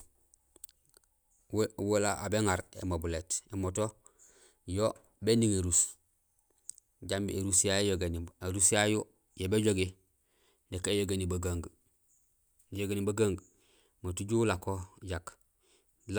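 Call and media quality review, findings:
No faults heard in this speech recording.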